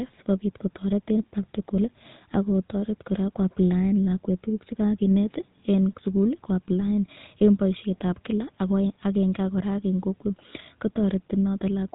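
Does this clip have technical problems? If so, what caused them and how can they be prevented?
Yes. Throughout, the speech has been squeezed through the GSM full-rate codec, consistent with 13 kbps, which rebuilds the voice from a vocal-tract model driven by sparse, regular pulses. That leaves a plainly buzzy, gravelly texture and nothing above 3.9 kHz. Prevent it by recording over a wideband path rather than a legacy GSM call.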